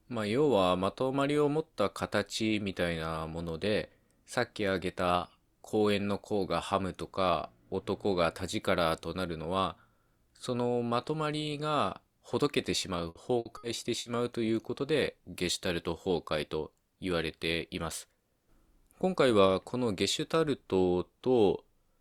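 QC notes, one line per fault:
13.09–14.08 s, repeated packet loss (robotic sound): four short gaps, the longest 60 ms, are bridged by stretching the preceding sound, about 240 ms in all, and about 120 ms is missing outright. The repeated patching gives a choppy texture, unlike a single clean dropout.
16.49–16.71 s, jitter buffer speed-up: the receiver trims pitch-period-sized slices, around 40 ms in total, to shrink excess buffered delay, so the audio runs at about 115% speed. Pitch stays unchanged, which separates this from a resampling or playback-rate error.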